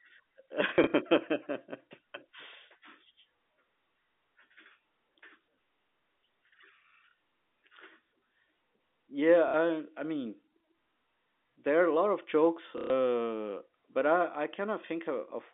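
Packet loss with last packet repeated occurs at 0.69 to 0.93 s (scattered drops), 7.11, 9.48 to 9.54 and 12.78 to 12.9 s. Lost packets were filled by replaying the previous one, so the runs stutter robotically and the single repeat at 7.11 s is a small blip, with the repeats pointing to roughly 30 ms packets.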